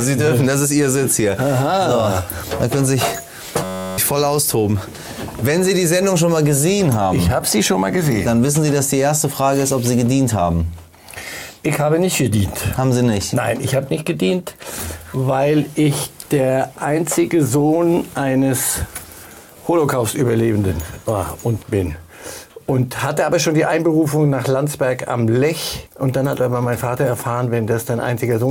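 A steady, pitched buzz near 94 Hz replaces the sound from 3.64 to 3.98 s. It is a system hang loop: the system froze while the hardware replayed one 10.67 ms buffer 32 times, which fits a 512-sample buffer, losing roughly a third of a second.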